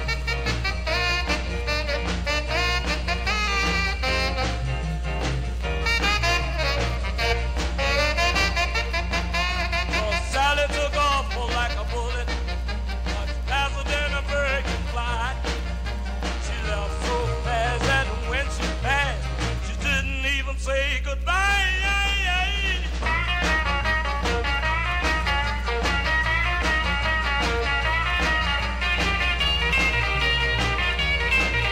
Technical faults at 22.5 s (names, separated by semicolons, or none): mains hum